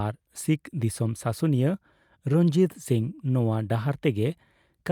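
Speech, with no technical faults audible anywhere in it.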